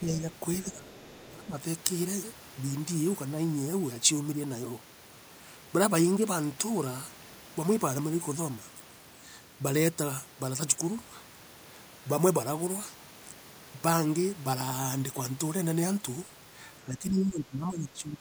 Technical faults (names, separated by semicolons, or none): speech suppressed in double talk; other side's voice leaking through